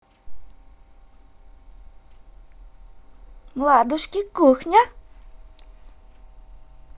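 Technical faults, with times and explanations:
Nothing stood out on listening to this speech recording.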